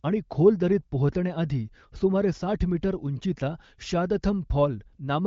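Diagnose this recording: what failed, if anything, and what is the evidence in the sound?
Nothing stood out on listening: the speech comes through the AMR wideband (HD Voice) path with its top end stopping near 7.6 kHz, and no stage of the chain gave any sign of trouble.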